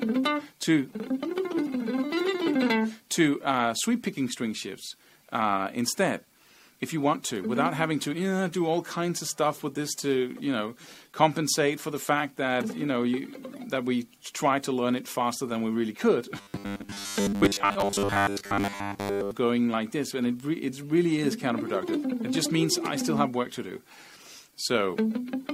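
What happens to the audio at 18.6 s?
New audio is likely arriving too seldom, so from 16.36 to 19.32 s a 10 ms segment is replayed while much of the real audio is skipped. This robotic sound from repeated short buffers imposes a fixed 100 Hz buzz, rigid and metallic.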